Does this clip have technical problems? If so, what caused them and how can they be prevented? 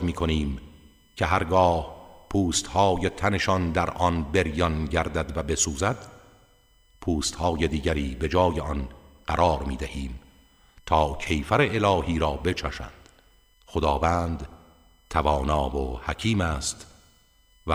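Yes. USB whine: current drawn in 1 ms bus frames leaks in through power or ground, giving a steady 1 kHz whine throughout, loudest at 3 kHz, roughly 40 dB down. A USB isolator, a separately powered interface or a clean, well-shielded cable and hub would prevent it.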